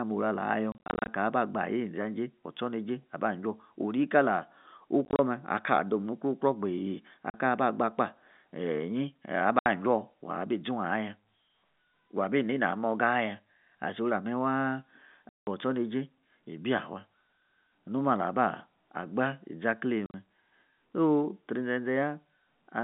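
Packet loss filled with silence strikes at 0.72–1.08, 5.05–5.19, 7.3, 9.59–9.66, 15.29–15.47 and 20.06–20.14 s. Lost packets were replaced by dead air, so the speech drops out in hard-edged gaps whose total lengths, 40 to 220 ms, fit 10 ms packets. The first and second bursts are scattered into short holes, and the one at 15.29 s is a single solid gap.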